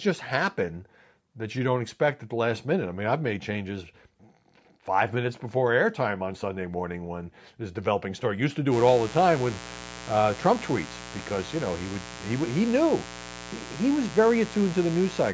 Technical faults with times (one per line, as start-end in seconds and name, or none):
8.69-15.34 mains buzz